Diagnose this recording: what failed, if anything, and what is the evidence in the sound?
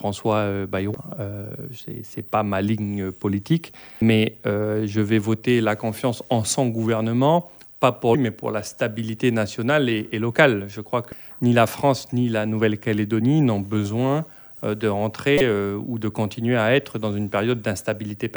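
Damaged data in a compressed stream, at the codec decoding stage: corrupted bytes make the decoder misread frames, lose sync and hunt for the next frame header. Each hit is a brief chirp or blip, at 0.94 s, 3.98–4.02 s, 8.11–8.15 s, 11.12 s and 15.38–15.41 s.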